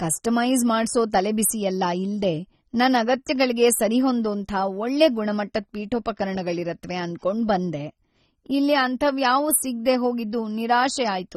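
Speech, with plainly audible AAC compression throughout: dull and smeared, nothing above 13 kHz, fizzy sibilants, likely a low-bitrate encode around 24 kbps.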